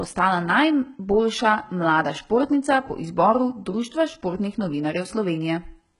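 The whole speech clip has that HE-AAC compression sound, with heavy, gritty, lispy s sounds, nothing above 11.1 kHz, and smeared treble. It likely comes from very low-bitrate spectral band replication, around 12 kbps.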